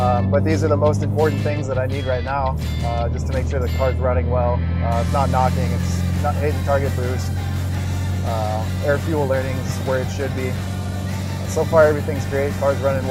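A resampler restarted on every block (44.1 kHz to 48 kHz, 40 ms blocks) leaves a 25 Hz tick-buzz throughout the audio which, unlike dropouts, vanishes in silence.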